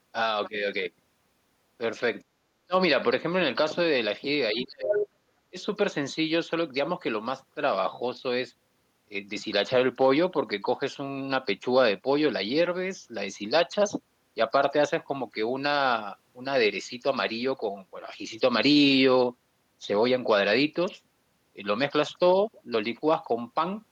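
At 2.22 to 2.34 s and again at 2.66 to 2.74 s the speech suddenly dips out, by roughly 40 dB and then 25 dB. That's speech suppressed in double talk, likely the echo canceller ducking everything while both sides talked at once. It happens again for about half a second from 4.52 to 5.02 s, down roughly 30 dB, and briefly at 5.5 to 5.58 s, down about 20 dB.

Right at the end of that long dip, from 4.92 to 5.08 s, you can hear the other side's voice leaking through, only about 5 dB below the talker. It's likely loudspeaker echo the canceller didn't fully remove, so it comes through as a short scrap.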